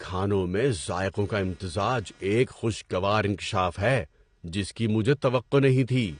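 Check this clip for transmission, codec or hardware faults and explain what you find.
AAC compression, heard throughout the whole clip, is the likely cause of the damage here. The codec splits the speech into blocks of frequency lines and spends its scarce bits only where a hearing model says they matter, which fits a low bitrate around 32 kbps. Nothing survives above 9.7 kHz, so the speech sounds dull and lacks air, while starved bands leave it smeared, with a warbling, fizzy edge on sibilants and held vowels that is plainly audible.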